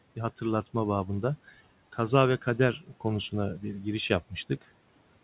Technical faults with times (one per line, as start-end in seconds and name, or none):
2.79-3.05 speech cut by the noise suppressor